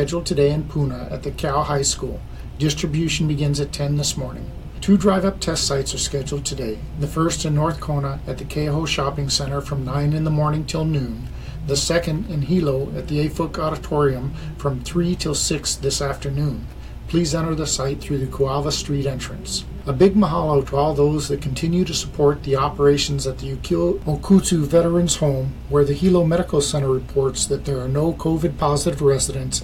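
Hard clipping appears briefly at 5.07 s, from 20.02 to 20.07 s, and from 24.32 to 24.37 s, with peaks pushed over the ceiling by about 2, 3 and 1 dB. Flattened tops give a short crackle on each peak, not the steady fuzz of sustained overload.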